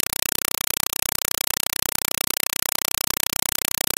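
From start to finish the speech is replaced by a compressed stream played as audio: undecoded AC-3 data treated as samples, likely at 192 kbps. Loud static bursts about 4 ms long repeat 31.25 times a second with silent padding between, a steady chattering that random digital noise lacks.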